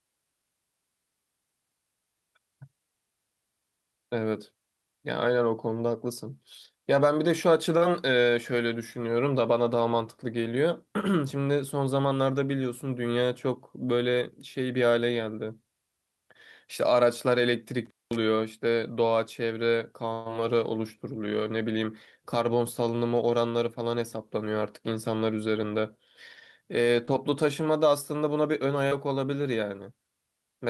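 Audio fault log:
7.77–7.83 s, 27.05–27.09 s and 28.87–28.93 s, short concealed packet loss: packets carrying about 40 ms, 20 ms and 40 ms of the call arrived too late or not at all. The decoder filled each hole with a continuation of the preceding sound (pitched where it was voiced, shaped noise where it was not) and then merged back into the real signal. Each one is a brief smear or wobble, and a short consonant can drop out.
17.85–18.16 s, intermittent contact: a loose connector or cable briefly lost contact, opening the line for about 0.21 s. The signal drops away abruptly, with crackle at the break and again at the reconnection. While the line is open, only faint hiss remains, and mains hum may be audible. The crackling edges give it a physical, scratchy character that distinguishes it from a clean digital dropout.
20.13–20.27 s, burst of packet loss: about 120 ms of consecutive audio was lost in transit. 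The receiver stretched the last good sound across roughly 124 ms, fading it as the gap went on, so there is no true silence. Instead, a held buzz or fading hiss bridges the gap. The audio then resumes further along, with the material from that stretch gone.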